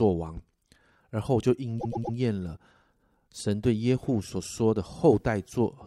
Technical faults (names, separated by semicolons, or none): repeated frames